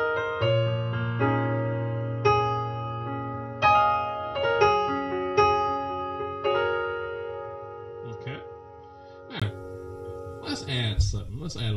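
From the start to 9.42 s the audio has nothing above 6.1 kHz, sits roughly 10 dB lower and carries its own noise floor, then clears after a 20 ms silence. This likely marks an input switched to a poorer device, not a simple filter change, since tone, level and noise all shift together.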